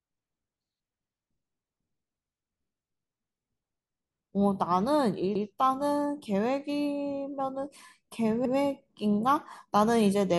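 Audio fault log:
5.35–5.45 s, overlapping chunks: a brief stutter in the speech, as if a sliver were said twice. A 100 ms stretch plays a second time because the next chunk, which fits a 3-second chunk length, starts before the previous one finishes.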